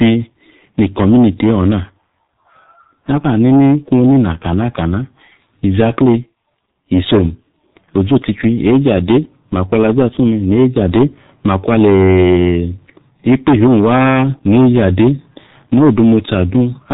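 The speech was passed through a G.723.1 codec for its whole length, with heavy damage consistent with a rate near 6.3 kbit/s. Long 30 ms frames and slow voice-model updates leave a hoarse, muffled tone and smeared consonants, and the narrowband coding leaves nothing above 3.8 kHz.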